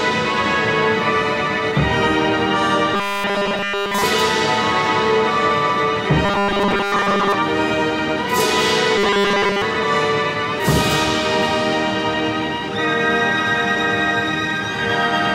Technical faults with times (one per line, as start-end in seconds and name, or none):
2.94-4.03 robotic sound from repeated short buffers
6.25-7.34 robotic sound from repeated short buffers
8.98-9.62 robotic sound from repeated short buffers